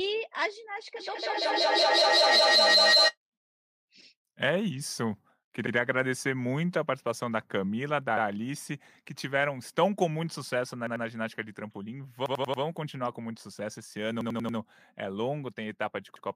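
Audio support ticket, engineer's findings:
Feedback howl, 0.96–3.17 s: tone near 4 kHz, peaking about 8 dB above speech, loop repeat roughly every fifth of a second. Acoustic loop between co-located call devices. Spectrogram: bright horizontal band.

Repeated buffer stutters at 5.67, 8.17, 10.87, 12.26, 14.21 and 16.16 s: 93 ms chunks replayed one to four times. Fits a 4096-sample playback buffer underrunning. Waveform: identical blocks, hard joins.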